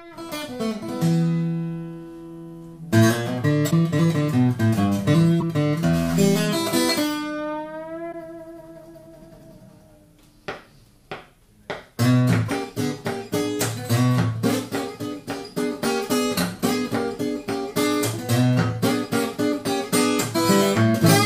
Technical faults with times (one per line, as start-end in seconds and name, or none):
3.70-3.73 broken MP3 bit reservoir
5.40-5.43 broken MP3 bit reservoir
5.95-6.45 stuck bit
8.11-8.14 broken MP3 bit reservoir
12.47-12.50 broken MP3 bit reservoir